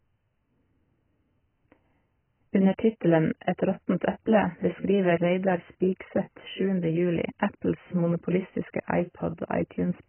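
Throughout, the speech sounds dull and warbly with nothing above 3.1 kHz, likely heavy AAC compression at a very low bitrate; unlike a plain low-pass filter, sibilants fizz and smear.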